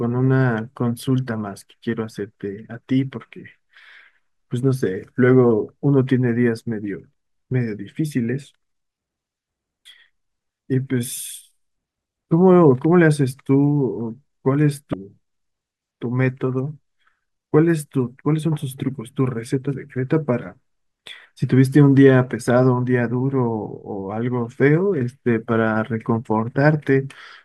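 At 14.91 to 14.94 s the speech breaks into a brief blip lasting about 30 ms. It comes from damaged data in a compressed stream. Some bytes in the encoded stream were corrupted. The decoder misread those frames, lost sync and searched for the next valid frame header.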